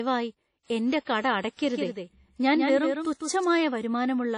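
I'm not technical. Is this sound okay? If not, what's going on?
No. The speech has three separate problems.

Throughout, it sounds washy and ringing, with a hiss that rises and falls with the speech, and nothing is present above about 10.1 kHz, so it lacks crispness. This is likely WMA compression, a lossy format squeezed hard enough that the damage is plainly audible.

From 0.63 to 0.65 s there is pre-echo: a brief hiss arrives just before a sharp sound, which then lands softened. The compressor handles audio in chunks and spread its noise across the whole chunk, including the quiet moment before the attack.

From 1.64 to 3.44 s you hear a doubled audio track: a second, somewhat quieter copy of the speech trailing about 150 ms behind, with no room echo, starting and stopping abruptly. The likely cause is the sound being captured twice, through a slower path or an editing mistake.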